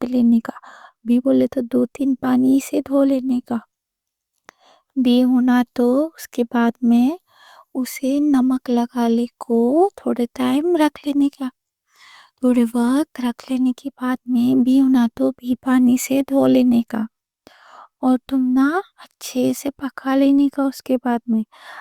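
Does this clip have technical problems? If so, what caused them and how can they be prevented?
No, nothing in this speech recording stands out as a technical problem, so there's nothing here to trace back or guard against.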